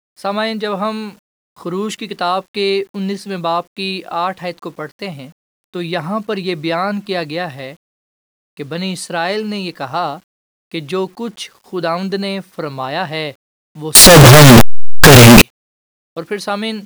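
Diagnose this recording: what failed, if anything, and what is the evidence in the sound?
A signed and unsigned mix-up, likely in sample-format conversion of the 8-bit audio, makes the speech from 13.95 to 15.42 s a harsh, very loud roar where quiet passages blast like loud ones, unlike clipping.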